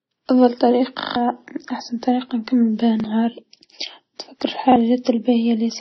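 Throughout the speech, what sounds like transcoding between lossy codecs, likely several passes such as MP3 then WMA then AAC, leaves stacked, smeared artefacts and nothing above 5.9 kHz. At 1.00–1.16 s, just before "أحسن طريقه نكمل بيها", a repeated buffer replays one short chunk four extra times, which fits a 40 ms buffer, giving a hard-edged stutter and losing about 150 ms of audio. The same fault recurs just after those words at 3.00–3.04 s and again at 4.72–4.76 s, each a single repeat heard as a brief stutter.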